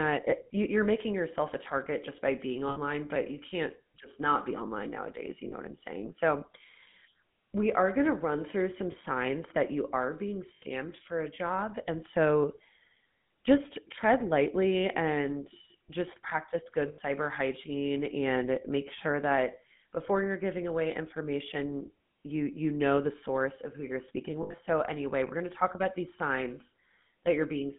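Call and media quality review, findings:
Buzzy, gravelly roughness on the speech throughout; band limited to about 150 Hz–3.6 kHz, no highs. Probable component: GSM full-rate codec, consistent with 13 kbps. Vocal-tract model excited by a sparse, regular pulse train; thinned excitation yields the buzz, and the line band caps the top end. Damage plainly audible.

Metallic, ringing holds where the speech should move on: 2.68–2.78 s, 5.48–5.54 s, 8.92–8.96 s, 10.54–10.63 s, 16.88–16.99 s (about 100 ms), and 24.42–24.59 s, where the gaps are scattered, with the longest near 70 ms. Probable cause: lost GSM frames. The decoder repeats the last good frame's parameters, so the sound is held and rings instead of cutting off.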